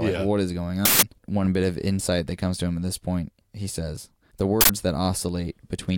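Right after "yeah what is going", at 0.85 s, there's a loud 170 ms blast of digital noise, an uninitialised buffer: a block went out before any audio was written into it, so stale memory got played, which fits an 8192-sample buffer. It happens again at 4.61 s after "point he says the", this time 85 ms long, which fits a 4096-sample block.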